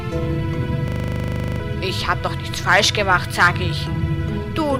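From 0.88 to 1.6 s there's a system hang loop: the machine stalled while the audio hardware kept replaying its ring buffer, so one 40 ms slice repeats 18 times, giving a coarse 25 Hz buzz and swallowing roughly 0.7 s of sound.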